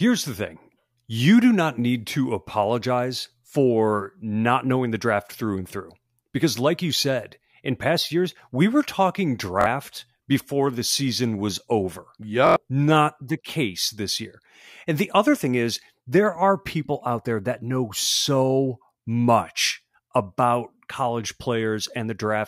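A short stutter breaks in at 9.61 to 9.66 s, just after "years we were talking": one slice of about 23 ms sounds three times in a row with a hard join at each restart. A longer one follows at 12.47 to 12.56 s, after "the season was over", where the slice sounds five times. This is a repeated buffer. New audio arrived late, so the device replayed its last block, which fits a 1024-sample buffer. About a twentieth and then a tenth of a second of real audio is lost.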